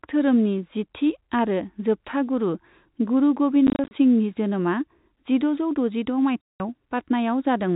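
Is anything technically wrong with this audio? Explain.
Yes. This telephone-band speech, carried over G.711 with nothing above 4 kHz, has packet loss filled with silence at two points. From 3.67 to 3.91 s about 130 ms of sound drops out in short scattered holes, none longer than 30 ms. At 6.41 to 6.6 s a near-continuous 190 ms gap opens. The receiver substituted silence for the missing packets, and the hole lengths fit 10 ms packets. Unlike concealed loss, which smears or repeats sound, these gaps are dead silent with hard edges.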